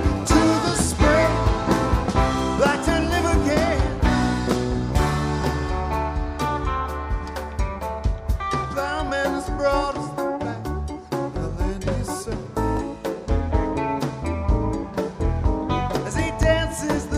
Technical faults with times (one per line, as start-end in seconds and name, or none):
1.76-16.43 clock drift buffer slips